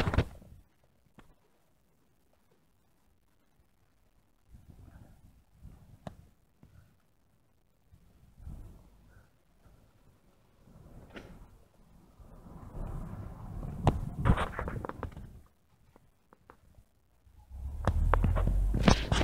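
Nothing stood out on listening to this audio.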